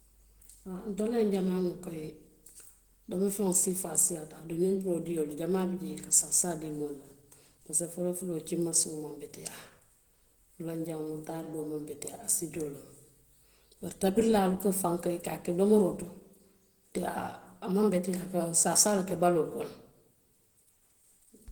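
Throughout the speech, plainly audible damage makes the sound hoarse and grainy, though content still extends to about 20.1 kHz. The likely cause is Opus compression in hybrid speech mode, consistent with a bitrate near 16 kbps, with upper bands only coarsely rebuilt.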